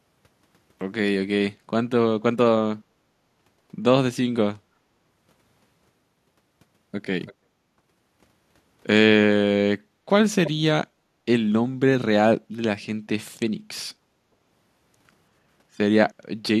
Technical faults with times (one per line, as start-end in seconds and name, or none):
7.26-7.34 echo leak
10.44-10.51 echo leak